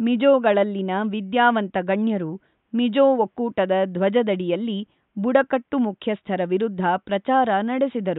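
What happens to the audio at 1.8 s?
Nothing goes wrong at 1.8 s: the speech carries on intact, with only the quiet room noise of the recording space sitting far beneath it.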